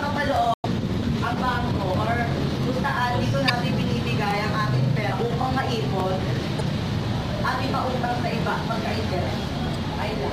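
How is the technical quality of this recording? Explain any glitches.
Four brief glitches break the recording, all from damaged data in a compressed stream, at 0.54 to 0.65 s, 3.48 to 3.50 s, 6.59 to 6.61 s and 9.74 s. Each time, corrupted bytes in the encoded stream leave the decoder misreading frames, losing sync and hunting for the next valid frame header before playback recovers. The result is a short chirp, squawk, click or brief hole that cuts across the sound. The first glitch, about a tenth of a second, is the longest.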